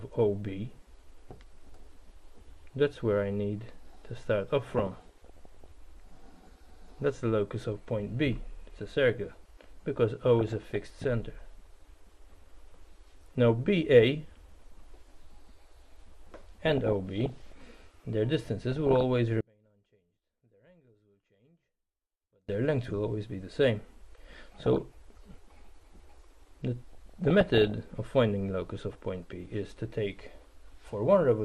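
Right from the start the whole clip has a dull, gurgly, granular quality that's plainly audible, likely MP2 compression at a low rate, around 80 kbps. Layer II starves its 32 sub-bands of bits, so upper bands drop out and flicker while the rest get coarsely quantised.

On top of that come bursts of DAB burbling at 4.67 to 5.66 s, 10.21 to 11.04 s, 16.65 to 17.52 s, 18.72 to 19.03 s, 24.30 to 24.82 s and 26.93 to 27.72 s. That's reception bit errors slipping past error correction into the MP2 data, putting watery blips and squelches into individual sub-bands and making bands jump in level.

Between 19.41 and 22.49 s the sound nearly disappears, dropping by about 36 dB and leaving only a faint residue. That's the classic signature of one channel inverted, likely a polarity flip on one side, so the shared content cancels when the stereo is folded to mono.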